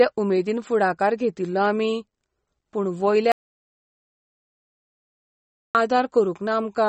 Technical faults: MP3 compression; audio dropout to silence

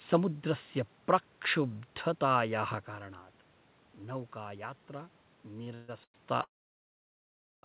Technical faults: short stall from a late packet; call audio freeze

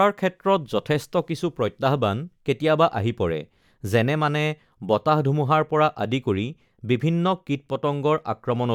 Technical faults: none

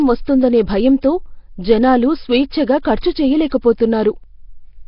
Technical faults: Nellymoser compression; pre-echo

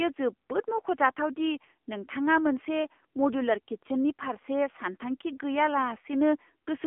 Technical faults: AMR narrowband mobile codec

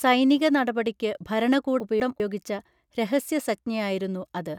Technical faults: chunks out of order

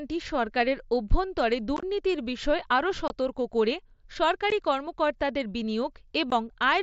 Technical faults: unconcealed Bluetooth headset packet loss

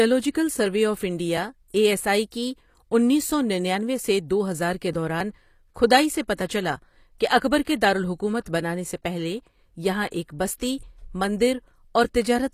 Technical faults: HE-AAC compression; pre-echo

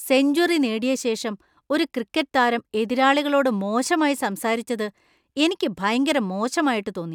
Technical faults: none

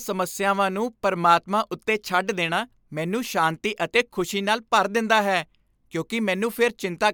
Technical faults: none

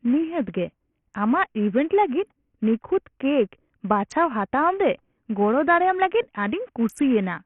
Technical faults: Bluetooth SBC compression

